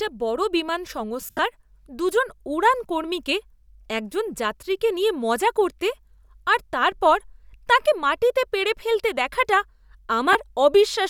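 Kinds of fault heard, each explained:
Lost LE Audio frames: about 140 ms dropped across 1.2 to 1.4 s, runs up to roughly 70 ms, concealed by a noisy smear; another brief gap at 10.33 s.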